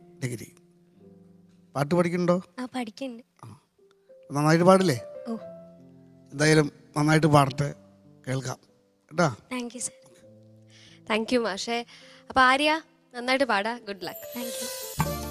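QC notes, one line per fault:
throughout: clock drift between sender and receiver. Small timing hiccups recur at uneven intervals across the clip, and the pacing never quite settles. The sender's audio clock runs roughly 3% slower than the receiver's, so the jitter buffer keeps draining faster than it refills. The receiver must keep filling the gap to stay in step, and those repeated corrections are what make the flow of sound feel slightly unsteady from start to finish.
0.06 to 13.97 s: repeated timing corrections. The audio drags slightly, with faint stutters and a tempo that wavers rather than holding steady. The net effect plays it at about 97% speed. To cover for the slow sender, the receiver keeps repeating short pieces of audio, always stretching and never cutting. The edits are unevenly spaced. Together they add roughly 0.4 s over the stretch, which is why the pace feels a little behind.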